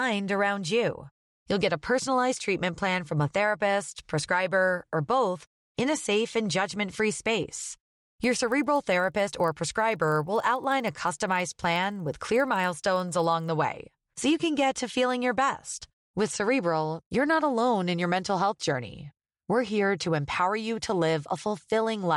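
A regular buzz at 25 Hz rides under the speech from 8.08 to 13.48 s, just after "and judgment free space". It comes from the resampler restarting on every block: each 40 ms block was converted separately, likely from 24 kHz to 48 kHz, leaving small errors at every block edge.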